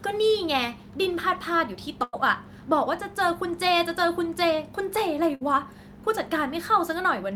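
A speech clip with two bursts of packet loss, at 2.03–2.15 s and 5.35–5.43 s: roughly 100 ms then 60 ms of audio vanish, concealed by a fading held buzz or hiss that shows as smeared, decaying bands before an abrupt waveform jump.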